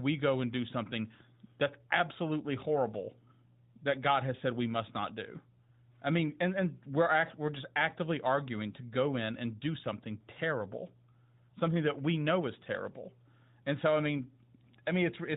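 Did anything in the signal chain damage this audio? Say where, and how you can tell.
No, nothing in the signal chain damaged this speech.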